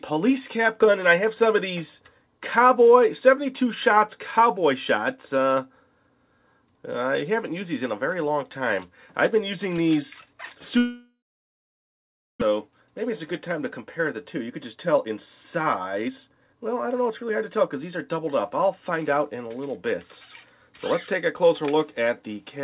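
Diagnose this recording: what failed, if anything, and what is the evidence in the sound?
Long network dropout, 10.78 to 12.44 s, at the network stage. The sound is carried on as a fading buzz before about 1.2 s of near silence. When the audio resumes, roughly a second of material is simply gone. This points to a burst of packets that never arrived, which is likely a network outage. The receiver's concealment extrapolated the last frames and then gave up. The delay built up across the gap, roughly 0.7 s.

Jitter buffer speed-up, at the buffer stage, in three stretches: 12.51 to 13.10 s at 110% speed, 13.59 to 15.16 s at 109%, and 15.60 to 19.01 s at 112%. The audio runs noticeably hurried while its pitch stays put. The receiver trimmed short pitch-period slices to drain the backlog left by the outage, taking out roughly 70, 150 and 400 ms. The G.711 mu-law path's 4 kHz ceiling is audible throughout.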